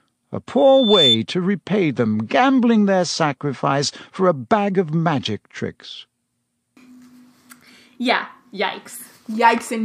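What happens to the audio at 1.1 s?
At 1.1 s the speech is caught in loudspeaker feedback squeal, which runs from 0.57 to 1.18 s and stops just before "to repay them gambling". A microphone is picking up the loudspeaker it feeds. At 3.5 kHz the loop gain tops one, so that tone keeps reinforcing itself. It swells over roughly half a second into a piercing whistle. By 1.1 s it sits around 5 dB above the speech.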